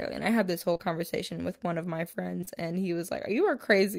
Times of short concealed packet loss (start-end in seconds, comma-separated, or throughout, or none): 0.73-0.81, 2.41-2.49